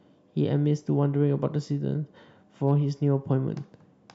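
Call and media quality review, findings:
Hard clipping, 2.67–2.71 s: brief crackle on a speech peak. Waveform tops flattened, overdrive about 0 dB. Spectrogram shows a thin broadband smear of added harmonics. Probable component: input gain stage or converter hitting its ceiling.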